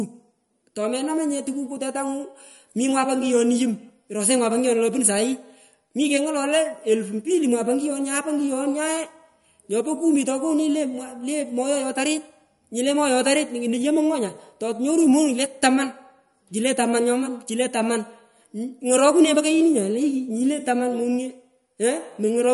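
All the way through, the speech has plainly audible MP3 compression: nothing above 11.2 kHz, watery swirl on s sounds, likely a low bitrate around 47 kbps.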